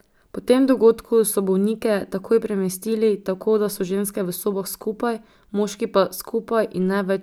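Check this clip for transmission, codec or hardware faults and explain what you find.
No transmission, codec or hardware faults can be heard anywhere in this speech recording.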